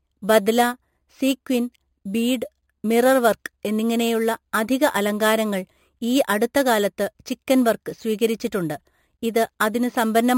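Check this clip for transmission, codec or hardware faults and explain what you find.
One fault, present throughout: imaging from sample-and-hold upsampling. The speech went from 11 kHz to 48 kHz by repeating samples unfiltered, leaving mirrored copies around 5.5 to 11 kHz, about 18 dB down, heard as a metallic fizz.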